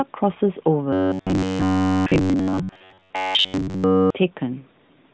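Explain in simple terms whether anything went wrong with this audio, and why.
From 0.93 to 4.17 s the speech becomes a stiff, metallic buzz at one fixed pitch, about 94 Hz. This is robotic sound from repeated short buffers, likely caused by a slice of roughly 10 ms being replayed whenever fresh audio arrived late. That differs from the narrow phone-call sound of the AMR narrowband mobile codec, which removes everything above 4 kHz for the whole clip and never locks the sound to one pitch.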